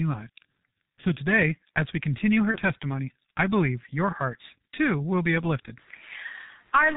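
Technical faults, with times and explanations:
Throughout: G.723.1 codec. Everything above 4 kHz is gone and the voice model only updates every 30 ms frame, so the speech comes across muffled and hoarse, with consonants smeared together. The damage is heavy, which fits the low 6.3 kbit/s mode.
2.51 to 2.58 s: VoIP packet loss concealed by the speech codec. About 30 ms of audio went missing, which points to a single lost frame. The decoder fills the gap by stretching its last pitch and filter into a fading buzzy tone or coloured noise, and the voice stays weak or distorted for tens of milliseconds or more after about 2.58 s.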